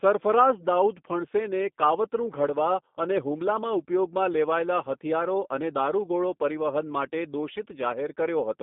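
From start to finish the speech has passed through the G.729 codec, here the G.729A variant at 8 kbit/s. The codec rebuilds each frame from a vocal tract filter, a pitch model and a few pulses. The line band runs about 200 Hz to 3.6 kHz, and nothing sounds above 3.7 kHz. The voice comes out muffled, slightly rough and clearly synthetic.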